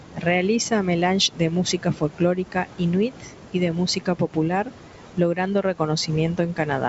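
Speech, with no technical fault to be heard. It carries G.722 wideband telephone coding, with nothing above 7.7 kHz and at most a faint trace of coding in the upper band, which fits the full 64 kbit/s rate.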